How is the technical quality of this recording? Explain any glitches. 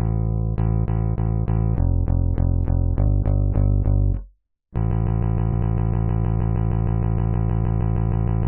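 Not great, since the back half gets stuck. From 4.91 s to the very end there's a broken-record loop: a 156 ms fragment repeats back to back about 23 times, a fast stutter. Likely the player or stream stalled and kept resending its last chunk, so whatever should have followed is gone.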